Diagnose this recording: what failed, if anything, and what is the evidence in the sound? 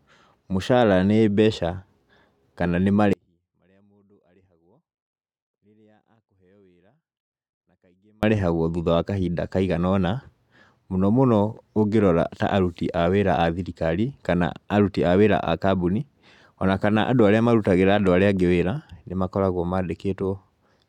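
An audio dropout to a faint residue runs from 3.13 s to 8.23 s, about 5.1 s in which the speech is gone and only a faint sound, something like 40 dB below the normal level, remains. Both edges are abrupt, unlike a pause or a fade, and the gap is not digital silence, so the path after the break stayed live. The likely cause is an intermittent analogue connection ahead of the converter that lost the wanted signal while the input kept running.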